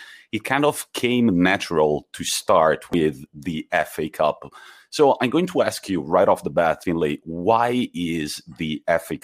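The speech skips abruptly at 2.93 s, right after "came natural to start", and again at 6.84 s, after "right off the bat", each time losing about a tenth of a second with the two sides butted together. This is likely audio missing between chunks, dropped at the joins of roughly 4-second blocks.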